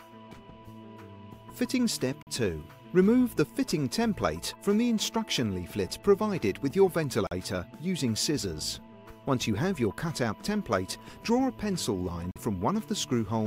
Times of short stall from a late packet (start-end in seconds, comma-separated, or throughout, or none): none